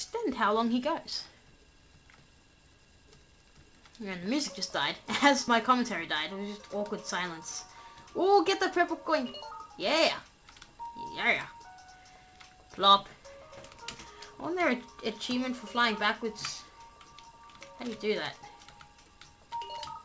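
No technical faults are audible.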